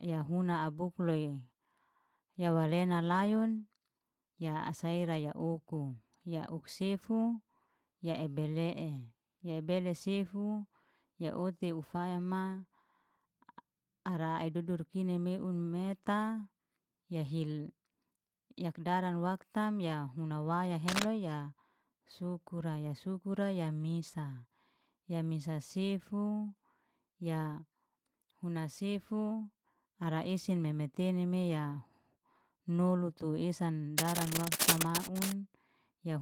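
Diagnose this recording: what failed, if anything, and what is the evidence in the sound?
In the analogue wiring, cable scratch noise appears from 20.87 to 21.07 s, after "waktam ya huna waya" and before "ya sukura ya sukura", and from 33.98 to 35.33 s after "tu esan". Dense, uneven rustling about as loud as the speech sits over the sound, likely from a worn contact whose resistance fluctuates as it moves. Unlike isolated digital clicks, it is a continuous irregular crackle, and unlike a dropout, the speech keeps going beneath it.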